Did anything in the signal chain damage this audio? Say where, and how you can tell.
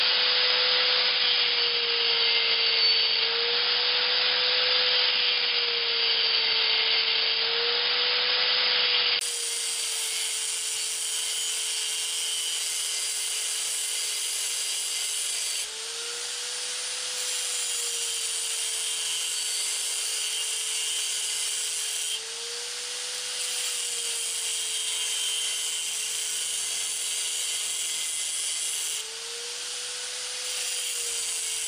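Yes. Until 9.21 s the sound is dull, nothing above 5.1 kHz, with faint background noise and a level about 5 dB different, then a brief gap. Likely an input switched to a poorer device.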